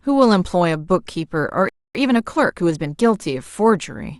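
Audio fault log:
1.69–1.95 s, playback stall: the speech cuts out mid-flow and the output drops to silence for about 0.26 s before resuming where it left off. The most likely cause is the player briefly running dry of buffered audio or having its output thread blocked, so nothing reached the output until data arrived again.
1.95–2.99 s, time-compressed catch-up: directly after the stall the speech runs hurried, at roughly 1.25 times normal speed, while its pitch stays where it was. The player is working off the backlog built up during the gap by cutting out tiny slices and cross-fading across the joins. That keeps the pitch steady but shortens the timing.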